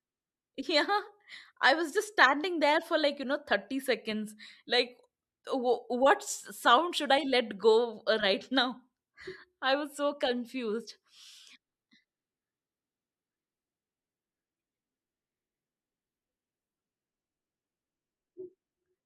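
Speech recording, with no audible technical faults anywhere.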